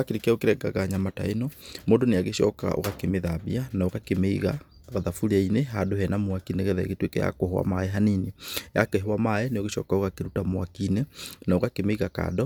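Nothing in the speech stood out as a technical problem on listening.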